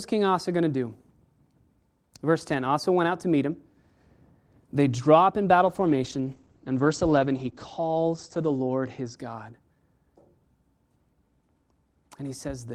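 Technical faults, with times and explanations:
5.67–9.22 s, call bitrate drop: right after "draw up in", the speech turns muffled and watery, losing its crisp upper range until it clears again at 9.22 s. The call's bandwidth estimate fell, so the encoder was told to go from 40 kbps down to 14 kbps, staying at that floor for about 2.9 s. At that rate Opus coded the signal more coarsely and narrowed its audio band from 20 kHz to 8 kHz, removing the highs.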